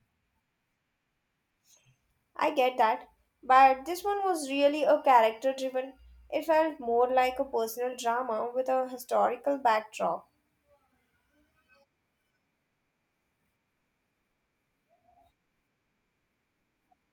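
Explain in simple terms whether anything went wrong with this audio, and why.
Dropped samples at 9.49 s: a single sharp click, most likely from a couple of samples missing, making the speech waveform jump abruptly to a later point.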